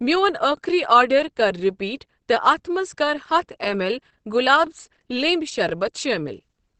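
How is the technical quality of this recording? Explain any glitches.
The recording has two audible faults: constant codec damage and one brief stutter.

Throughout, the speech sounds muffled and hoarse, with nothing above 8.5 kHz. This is likely Opus compression in its speech mode, which fits a low bitrate near 16 kbps.

From 2.62 to 2.64 s there is an overlapping chunks fault. Chunks of about one second overlap, so 23 ms replays, giving a short click-like stutter.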